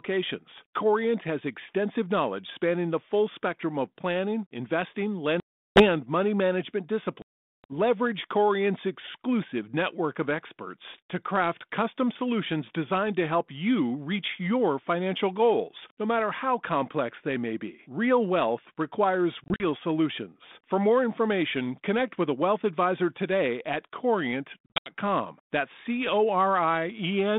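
Hard-edged silent holes cut the speech at 5.4 to 5.86 s and 7.22 to 7.64 s (about 360 and 420 ms lost), then as scattered dropouts over 19.44 to 19.63 s and 24.66 to 24.9 s. Each hole ends with slightly distorted speech that settles within tens of milliseconds. This is packet loss on an ADPCM call: with packets gone, the decoder's adaptive predictor and step size drift from the sender's until they resynchronise, on a band-limited G.726 line that fits 32 kbit/s.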